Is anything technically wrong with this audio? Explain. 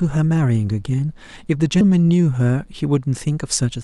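Yes. A mains buzz runs through the whole speech clip. Switching spikes twice in every 60 Hz cycle add a raspy harmonic buzz, sitting about 40 dB below the speech.

At 1.81 s, compressed frames were skipped. Roughly 150 ms of audio vanished, which fits a 32 ms frame length. The speech jumps ahead at the join.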